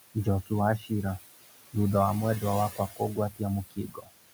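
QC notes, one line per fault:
Throughout: noise suppressor artifacts. The suppressor treats the steady room background, sitting about 12 dB below the speech, as noise and pulls those bands down by about 19 dB frame by frame. Because the gain keeps switching, the background drops away in the gaps and swells back under the speech.
0.78–0.91 s, 2.71–3.41 s, 3.67–4.10 s: speech cut by the noise suppressor. In these stretches the suppressor mistakes parts of the speech for background and turns them down along with it, so softer consonants and endings sound swallowed or faint. The first dip is brief, roughly 100 ms affected, at about 11 dB. The one right after "thutha wa mwendwa" sinks about 17 dB, and the last about 21 dB, each dulling roughly 300 ms of speech.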